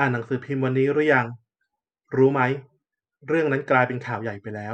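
Nothing stood out on listening to this speech recording.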